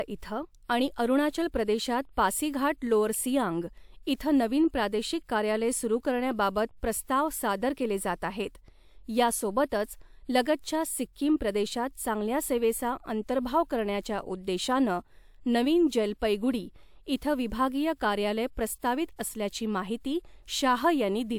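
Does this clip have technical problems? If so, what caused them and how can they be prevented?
No, there are no technical problems to address here.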